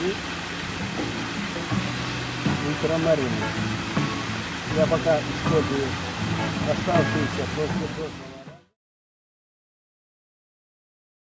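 Nothing here is a fault: the gentle fade-out easing in from about 7.5 s and finishing at 8.77 s is a deliberate edit, and the top end stopping at 8 kHz is just what call microphone processing does to the sound.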